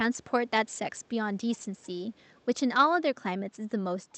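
An echo canceller on a loudspeaker side likely let some of its microphone pickup through, so an echo leak returns the speech about 0.37 s late, roughly 30 to 40 dB down, as faint scraps at 0.15–0.31, 0.74–0.78, 0.96–1.08, 1.57–1.87 and 2.15–2.45 s.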